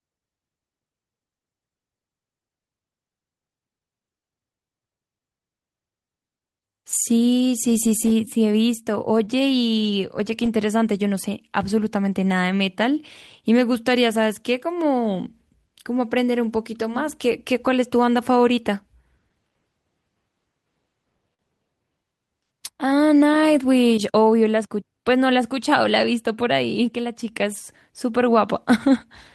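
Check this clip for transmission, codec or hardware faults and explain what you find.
Two short stalls from late packets interrupt this speech clip. Both are the same fault. The first runs from 9.25 to 9.31 s, the second from 21.34 to 21.42 s. In each, a packet arrived after its playout time and the jitter buffer ran dry. The receiver held the last sound, for 21 ms and then 49 ms, and resumed where it stopped. Nothing is lost. Playback falls behind by those amounts. You hear a brief smeared hold, with a faint buzz or dip.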